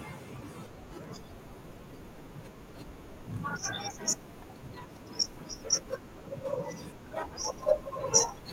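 From 1.04 to 7.45 s, a regular click recurs every 2.13 s in the speech, about four times. These are likely clock drift buffer slips: a clock mismatch of roughly 700 ppm drops or repeats around 70 samples each time.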